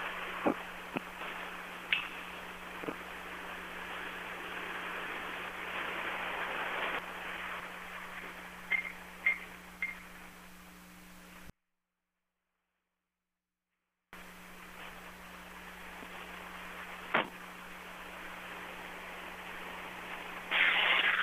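A sound recording with an audio dropout to a faint residue. At 11.50 s the sound cuts out abruptly and returns at 14.13 s, about 2.6 s later. Only a faint leak remains, roughly 40 dB down. The likely cause is a break upstream while the later path stayed live.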